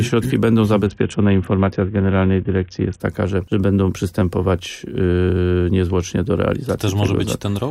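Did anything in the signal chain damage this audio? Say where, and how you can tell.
Yes, at the codec stage. From 0.86 to 3.00 s the treble goes dull and a gritty noise rises, then clears. That's a Bluetooth SBC bit pool drop, consistent with a fall from 28 to 6 (about 60 kbps). Starved of bits, the encoder abandons the top sub-bands and quantises the rest coarsely.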